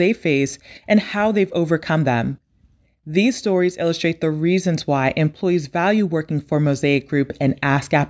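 No dropouts, clicks, distortion or level jumps anywhere in the speech.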